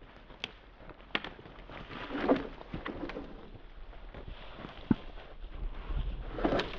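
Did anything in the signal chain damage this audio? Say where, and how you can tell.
No, nothing in the signal chain stood out as a problem when listening to this audio.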